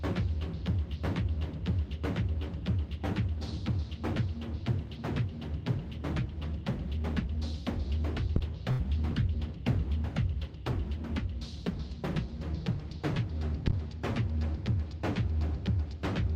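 At 8.36 s a phantom power thump hits: a supply switching on or off on a live input sends a step through the coupling capacitors, giving a deep thump that dies within about 17 ms. At 8.71 s comes a burst of packet loss. For about 76 ms the receiver stretches the last sound and fades it. About 80 ms of audio is lost before playback resumes at 8.81 s. A second thump, decaying in about 15 ms, lands at 13.68 s.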